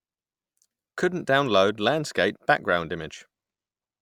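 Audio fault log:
No faults are audible in this speech recording.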